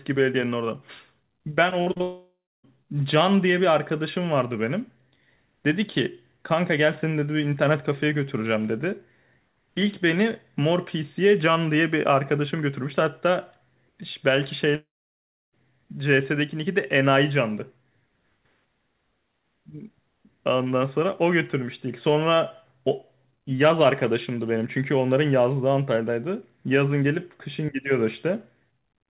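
Speech heard through a narrowband call path, with nothing above 4 kHz, consistent with G.711 mu-law telephone coding. From 1.70 to 2.02 s the sound turns choppy and robotic, with four short holes up to 47 ms patched over. This is repeated packet loss, with about 37% of that span concealed. It runs straight into a fading buzz or hiss and then 0.27 s of silence until 2.65 s. From 14.75 to 15.54 s there is a brief smear and then 0.67 s of silence. Both of these likely come from a long network dropout, where the receiver briefly extends the last sound and then returns without the lost audio.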